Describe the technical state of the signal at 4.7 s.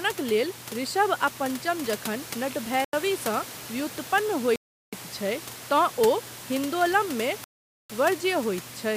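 At 4.7 s the signal drops to silence for about 0.37 s, from 4.56 to 4.93 s, then resumes. This is likely a Bluetooth stall, where delayed packets emptied the headphone buffer.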